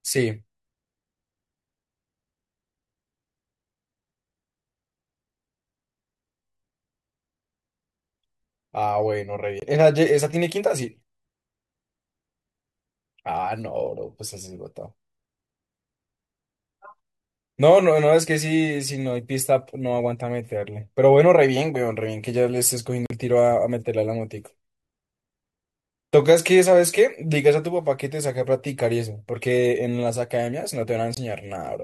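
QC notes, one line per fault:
9.60–9.64 s, 23.06–23.11 s, 31.15–31.18 s: corrupt frame muted. Abrupt silent gaps of 40, 54 and 38 ms, each fitting one or two rejected compressed frames that the decoder replaced with silence, with timing preserved.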